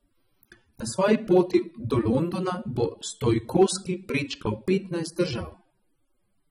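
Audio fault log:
Throughout, AAC compression. The speech sounds dull and smeared, with a warbling, fizzy texture on sustained sounds and sibilants, and the damage is plainly audible. The likely cause is AAC-LC coding at a low bitrate, and the sound fits about 24 kbps. At that rate the encoder keeps only what its hearing model rates most important in each frame and quantises it coarsely. The detail it discards leaves the top end thin and makes held sounds shimmer.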